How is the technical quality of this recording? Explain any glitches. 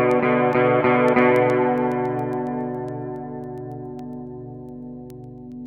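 The recording has one recurring fault. Word clock ticks run from 0.11 to 5.66 s, around forty sharp ticks roughly every 0.15 s. An unlocked receiver clock drops or repeats one sample at each slip, which fits a clock error of about 150 ppm.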